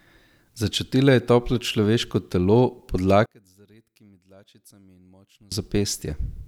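From 3.26 s to 5.52 s the speech collapses when heard in mono, dropping by about 31 dB to a faint residue before returning at full level. The likely cause is one channel inverted: with one side's polarity reversed, the centred speech cancels when the channels are summed. On a waveform the mono sum shrinks to a near-flat band for that stretch. A spectrogram shows the energy fading almost to nothing.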